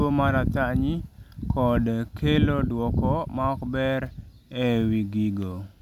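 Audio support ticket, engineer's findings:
No audible faults found in this recording.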